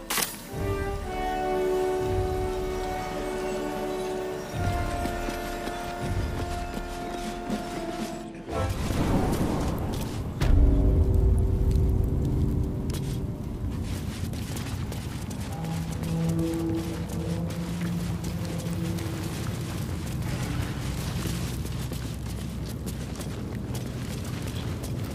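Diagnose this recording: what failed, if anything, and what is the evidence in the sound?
Chunks out of order, at the buffer or packet-reassembly stage. Jumbled moments occur at 8.7–8.94 s, 15.0–15.12 s and 19.08–19.2 s. A 60 ms block plays late, one slot behind at 15.0 and 19.08 s and three at 8.7 s, leaving hard joins without missing audio.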